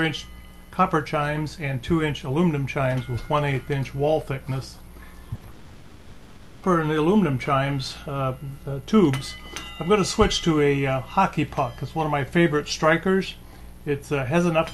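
At 5.35 s, running to 5.43 s, a burst of packet loss leaves a gap of about 60 ms that the receiver fills by continuing the last sound and letting it fade. This is heard as a brief held buzz or hiss. A spectrogram shows smeared, repeated frames that dim before the audio resumes slightly ahead.

From 5.51 s to 6.65 s the sound is replaced for about 1.1 s by a stretched continuation of what came before, with no true silence at any point, and then resumes further on. This is likely a long network dropout, with concealment covering the whole gap. The waveform shows a smooth, repetitive envelope in place of normal variation, and the spectrogram shows flat, blurred bands.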